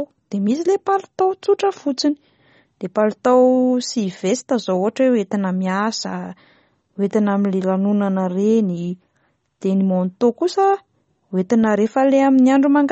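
A speech clip. Throughout, the treble stops sharply near 8.4 kHz, and weak detail swirls watery. This is likely MP3 compression, fitting a bitrate around 32 kbps.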